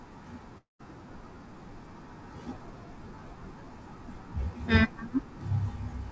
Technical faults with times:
0.58-0.81 long network dropout

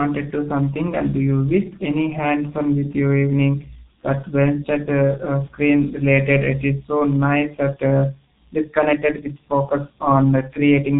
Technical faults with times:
0.00-10.99 G.723.1 codec

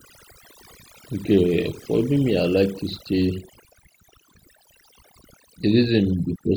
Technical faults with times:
0.00-6.56 overdone noise removal

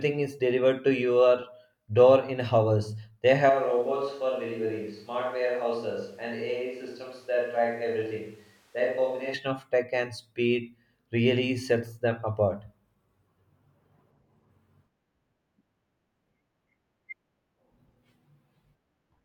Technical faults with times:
3.50-9.34 switch to a distant microphone

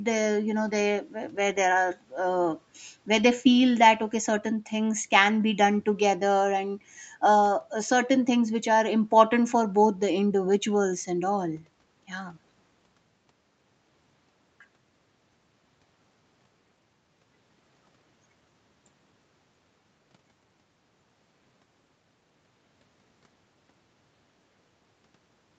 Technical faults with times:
none

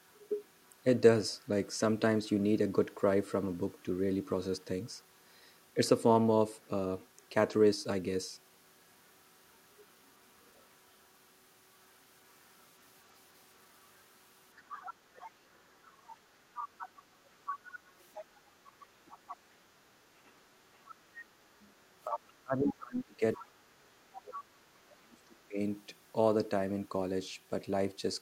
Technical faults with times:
0.07-0.69 other side's voice leaking through
2.27-2.31 other side's voice leaking through
6.63-6.67 other side's voice leaking through
9.08-10.75 other side's voice leaking through
12.29-20.95 other side's voice leaking through
22.04-25.59 speech suppressed in double talk
23.35-24.78 other side's voice leaking through

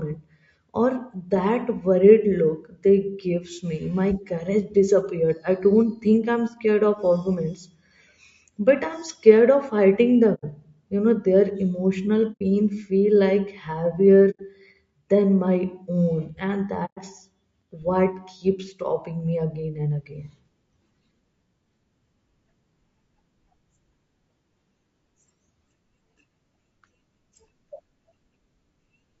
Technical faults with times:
0.00-29.20 low-delay AAC compression
10.34-10.45 AAC frame loss with muting
12.32-12.41 AAC frame loss with muting
14.30-14.40 AAC frame loss with muting
16.85-16.98 AAC frame loss with muting

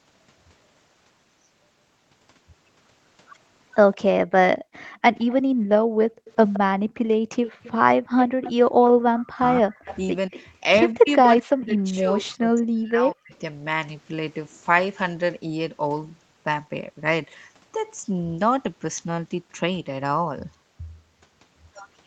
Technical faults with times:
3.93-8.90 echo leak
4.56-7.29 background gated by the echo canceller
9.12-13.33 speech suppressed in double talk
9.85-10.45 echo leak
11.38-11.42 echo leak

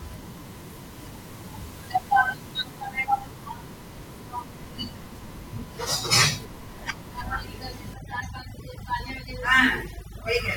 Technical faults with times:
7.94-10.56 overdone noise removal

